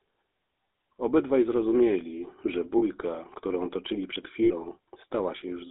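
Throughout the speech, the GSM full-rate codec gives a plainly audible buzzy, gravelly roughness, consistent with a 13 kbps coder that rebuilds speech from pulse-driven vocal-tract filtering. A spectrogram shows the band confined to 300 Hz to 3.7 kHz, with coarse, grainy harmonics.

At 2.78 to 2.83 s and at 4.44 to 4.52 s come lost GSM frames, about 40 ms and 60 ms long. The decoder repeats the last good frame, leaving a brief metallic ring. The waveform shows a short repeated envelope, and the spectrogram shows frozen, smeared stripes.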